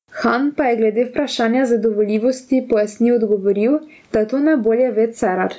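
Gain pumping runs through the whole speech clip: the gain swings by about 15 dB, ducking under loud syllables, likely from over-high gain hitting a fast limiter, unlike a noise gate's abrupt cut-off.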